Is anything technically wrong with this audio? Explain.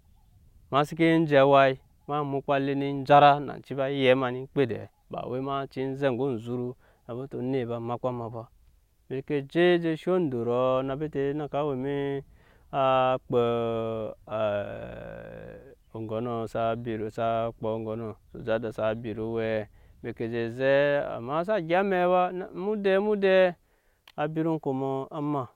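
No, nothing here sounds technically off; this is a perfectly sound speech recording as far as the ear can tell.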